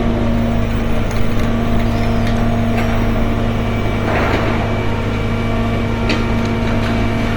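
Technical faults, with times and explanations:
Throughout: Opus compression, likely the cause of the plainly audible damage. Tonal parts turn grainy and rough rather than swirly, because the encoder keeps each band's energy but fills starved bands with folded copies or noise, which fits a low rate near 24 kbps in music mode. A spectrogram would show full bandwidth reaching about 20.2 kHz with few holes, but smeared, noise-textured harmonics. The waveform would look largely normal.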